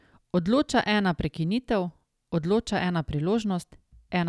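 Nothing in this speech recording stands out as a technical fault; it runs its whole course without a glitch worth pointing to.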